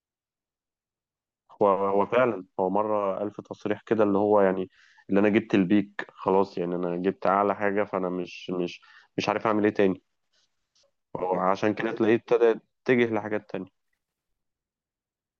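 Audio read two samples at a time (double speed) appears from 13.83 to 14.43 s: the reader treats each pair of samples as one frame, so this speech runs twice as fast and jumps 12 semitones, a full octave higher.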